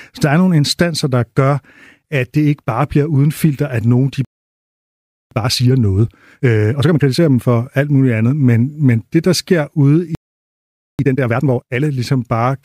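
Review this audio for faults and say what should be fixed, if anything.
The speech cuts to silence twice: at 4.25 s, right after "filter at nogen de", for about 1.07 s, and at 10.15 s for about 0.84 s. This is a playback stall, likely the player running out of buffered data or its audio thread being blocked. Keeping a deeper buffer and running the audio thread at high priority would prevent it.

After each gap the speech sounds hurried but keeps its normal pitch. From 5.31 to 7.43 s it plays at 1.5 times normal speed, up to "alt muligt andet men". From 10.99 to 11.81 s, after "det der sker ude", it plays at 2 times. This is time-compressed catch-up: the player trims and cross-fades small pieces to work off its backlog. Preventing the stalls, or capping the catch-up rate near real time, would remove it.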